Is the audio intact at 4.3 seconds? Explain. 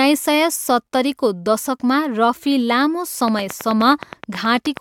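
No. A train of clicks runs from 3.28 to 4.78 s: regular ticking at 9.4 per second, about 10 dB above the speech, likely from electrical interference.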